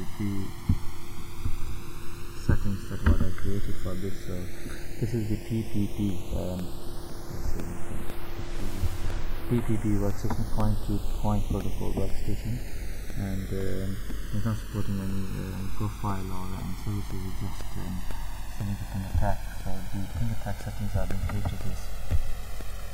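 From the start, the two channels drift apart. They appear to come from devices on separate clocks that differ by roughly 100 parts per million, so the delay between left and right grows steadily to about 1.5 ms by the end. When the channels are summed to mono, this sliding delay produces comb-filter notches that sweep slowly downward and tighten in spacing, heard as a gradual flanging. On a spectrogram of the mono sum, the notches appear as evenly spaced dark bands gliding across the frequencies.

From 6.09 s to 22.61 s there are periodic USB or driver dropouts, about thirty in all, spaced exactly 0.5 s apart. Each time, roughly a millisecond of audio is replaced with silence. That fits a background task briefly stalling the bus or driver at a fixed interval. Each gap is heard as a small tick or pop, but only where sound is present. In the waveform, the gaps are hairline flat spots at a regular rhythm, and on a spectrogram they are thin vertical broadband lines.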